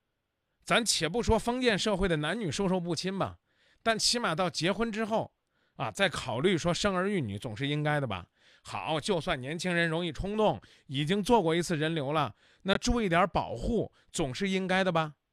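At 12.74 to 12.77 s the speech drops to 18 ms of silence, then picks up again. This is likely a Bluetooth stall rather than packet-loss concealment, which would smear the gap.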